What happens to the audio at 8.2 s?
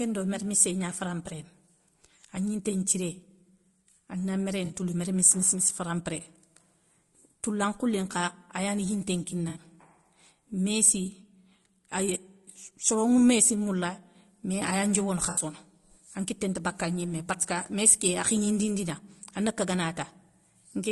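At 8.2 s the speech sounds rough and grainy, with noise filling the gaps between harmonics, as it does across the whole clip. This is likely low-delay AAC compression, whose short frames blur pitch harmonics, at a rate that fits about 32 kbps. Unlike bandwidth limiting, the top band sounds lowered or synthetic rather than simply missing.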